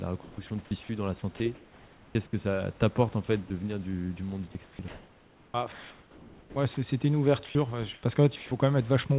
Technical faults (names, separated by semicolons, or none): sound chopped by the voice detector; sound dropped by the voice detector; comfort noise in place of the background